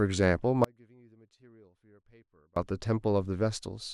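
An audio dropout to a faint residue runs from 0.64 to 2.56 s: the speech cuts abruptly, leaving only a faint trace far below normal level, likely a signal loss with the path still live.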